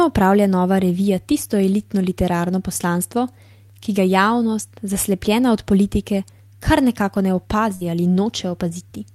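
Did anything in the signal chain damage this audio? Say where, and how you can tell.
Yes, there's a burst of packet loss on the network side, from 7.75 to 7.84 s, right after "politike kar nekako ne". The receiver stretches the last sound for about 55 ms, fading it down, then jumps ahead, leaving roughly 60 ms of speech missing.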